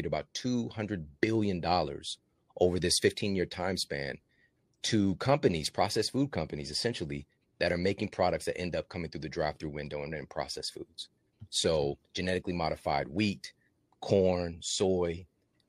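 Listening through the speech recording, nothing stood out as a technical problem at any point.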